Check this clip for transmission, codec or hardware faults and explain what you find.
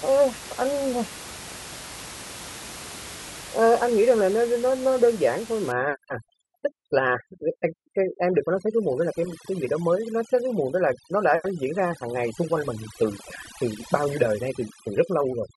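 One fault is present: overdone noise removal, from 5.72 s to the end of the clip. Before that point, the room noise sits about 15 dB below the speech. From 5.72 s, an over-aggressive noise reduction stage mutes any frequency band that falls near its noise estimate, taking quiet speech components along with the noise. In the pauses the background drops and breaks up into twinkling specks.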